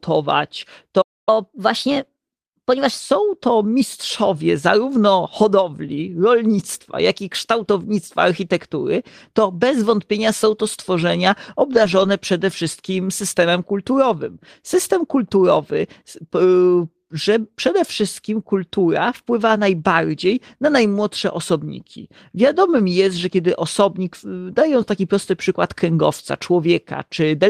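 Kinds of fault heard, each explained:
Playback stall: The speech stops dead in mid-flow at 1.01 s and stays silent until 1.29 s. That is a gap of about 256 ms. The sound then carries on from the point where it broke off. Nothing is skipped. The likely cause is a player that ran short of data, or a playback thread that was briefly blocked. The output had nothing to play until it recovered.
Catch-up at higher speed: Right after the silence, from 1.29 s to 3.00 s, the speech runs fast. It plays at 1.15 times normal speed. Because the player resamples to do this, pitch rises along with tempo, by about two semitones. The voice sounds hurried and raised. This is the player working through its backlog to win back the time lost in the stall. At 3.00 s speed and pitch settle back to normal.
Lost packet rebuilt from error correction: Between 11.71 s and 12.09 s the speech turns rougher and noisier for a short stretch. 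There is no gap. About 200 ms of audio comes from low-bitrate backup copies. Each copy travelled inside the packet that followed the lost one, which is Opus in-band forward error correction. The length points to roughly ten lost 20 ms packets. The decoder played the coarse copies to fill the holes.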